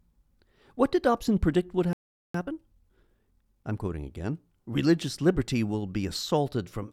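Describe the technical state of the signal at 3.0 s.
At 3.0 s the speech is in a time-compressed catch-up, running from 2.34 to 3.98 s, just after "predict would". Small slices are cut and cross-faded, so it plays about 1.25 times fast. Pitch stays normal.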